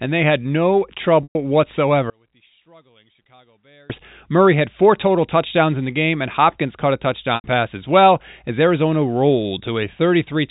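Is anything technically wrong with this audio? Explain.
Yes, two kinds of fault are audible in this speech recording.

Packet loss with pitch repetition occurs twice: from 1.23 to 1.35 s, right after "and they had no", and from 7.35 to 7.44 s, between "caught a" and "pass as well as". Audio went missing for 120 ms and then 90 ms, which fits runs of three or four lost packets. The receiver filled each gap by looping the last pitch period and fading it out over roughly 50 ms. Both gaps outlast that fade, so each one holds briefly as a buzzy tone, drops to silence, and then the speech cross-fades back in.

From 2.1 to 3.90 s the speech suddenly sinks by about 34 dB, leaving only a faint residue before returning at full level. This is likely a case of one channel inverted: with one stereo side's polarity reversed, the centred voice cancels almost completely when the channels are combined to mono. 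All that survives is the small difference between the two sides. The G.711 A-law telephone band, capped at 4 kHz, is audible throughout but not at fault.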